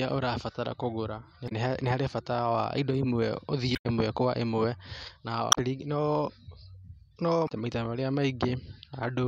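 The speech hits damaged data in a compressed stream four times: 1.45–1.52 s (after "ũrabatara kũgũra", before "nĩ harĩ bata wa"), 3.72–3.86 s (after "bata wa indo imwe"), 5.49–5.58 s and 7.45–7.51 s. Corrupted bytes throw the decoder off sync while it hunts for the next frame, leaving a short chirp, squawk, click or hole.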